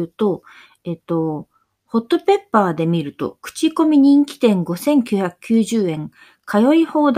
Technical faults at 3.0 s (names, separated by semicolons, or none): none